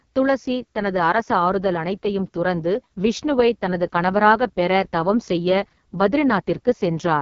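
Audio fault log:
throughout: AMR wideband (HD Voice) codec. The speech was coded with a pulse-excited vocal tract model at a very low rate, which fits AMR-WB's lowest 6.6 kbit/s mode. The heavy coding makes it rough and raspy, and nothing remains above 7.4 kHz.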